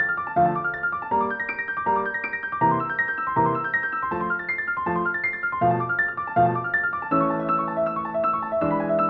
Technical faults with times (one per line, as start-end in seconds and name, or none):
none